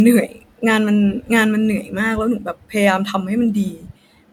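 From start to end the speech carries generation loss: a swirly, hollow coloration with smeared consonant onsets, more degraded than a single MP3 at 128 kbit/s would sound. The likely cause is repeated lossy re-encoding, about four passes, each requantising on a shifted frame grid so errors stack. On a spectrogram, upper bands look patchy with flickering holes and blurred edges around transients; the waveform shows softened attacks and pre-echo before sharp onsets.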